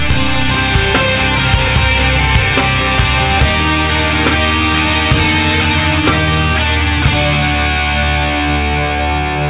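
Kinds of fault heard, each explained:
No faults heard.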